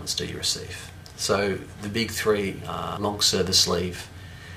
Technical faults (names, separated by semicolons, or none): system hang loop